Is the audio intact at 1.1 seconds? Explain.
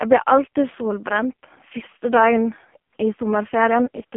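No. At 1.1 s, as across the whole clip, the speech carries AMR narrowband mobile codec damage. The line band runs only from 200 Hz to 3.4 kHz, and the heavy buzzy, synthetic coloring suggests one of the codec's lowest modes, around 5 kbps. At that rate each frame's vocal-tract model is driven by only a few pulses. A plain telephone-band filter would also cut everything above 3.4 kHz but would leave the voice natural, without this robotic buzz.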